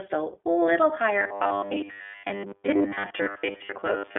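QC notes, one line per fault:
throughout: iLBC codec, coding each 20 ms frame on its own at a rate that fits 15.2 kbps, with the band held to about 300 Hz to 3.5 kHz and nothing above 3.7 kHz. The damage is plainly audible as a rough, slightly synthetic edge, unlike plain band-limiting, which dulls without roughening.
1.19 to 4.18 s: robotic sound from repeated short buffers, likely from new audio arriving too seldom so the last 10 ms is replayed while real audio is skipped. Roughly seven tenths is repeats, imposing a rigid 100 Hz metallic buzz that tracks the speech only loosely, not a codec-style roughness.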